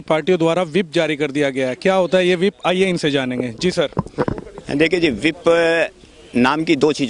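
No technical faults can be heard in the audio.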